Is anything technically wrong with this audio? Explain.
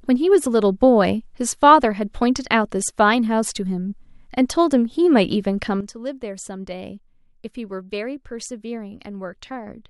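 Yes. At 5.81 s the speech and its background noise both drop abruptly by about 12 dB and stay low to the end. This is a sudden gain jump, likely a digital gain setting or bit shift applied from one sample to the next without a ramp.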